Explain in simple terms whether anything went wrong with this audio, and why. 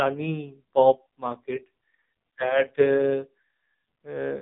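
AMR narrowband mobile codec damage runs throughout the clip: this phone codec drops everything above 3.8 kHz and squeezes the speech hard, making it sound muffled, buzzy and synthetic.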